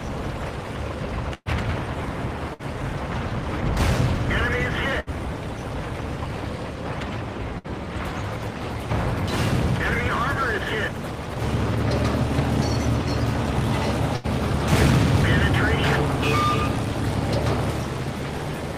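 Bursts of packet loss at 1.34, 2.54, 5.00, 7.58 and 14.16 s each drop 60 ms. Concealment repeats and fades the last sound, which shows as smeared, decaying spectral bands before an abrupt restart.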